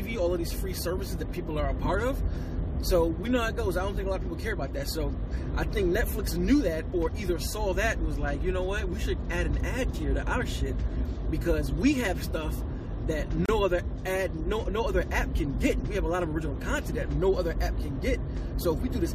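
At 13.46–13.49 s, a gap between stream segments: misaligned segment timestamps leave 30.5 ms unfilled, heard as an abrupt, hard-edged silent hole in the sound.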